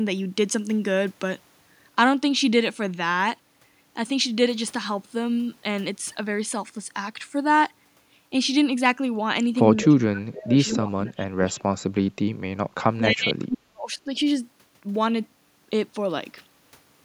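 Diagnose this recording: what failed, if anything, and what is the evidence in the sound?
The failure is in call processing: speech suppressed in double talk. The speech is pulled down hard in three stretches, 9.88–10.57 s, 10.8–12.13 s and 12.74–14.09 s, with the deepest dips reaching roughly 30 to 40 dB. The likely cause is an echo canceller that, with both ends talking at once, mistook the near talker for loudspeaker echo and attenuated it. Packet loss would instead leave short dropouts or concealment artefacts rather than sustained, gain-like ducking across whole phrases.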